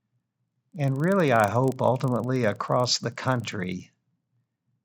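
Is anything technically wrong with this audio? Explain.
Yes. A resampler restarted on every block affects the speech from start to end. The conversion from 16 kHz to 48 kHz was done on 40 ms blocks independently, so at each block edge the converter lacked the true neighbouring samples and produced a small error there. Those errors repeat at 25 Hz, heard as a steady low buzz or rapid ticking riding on the speech, present only while sound is playing.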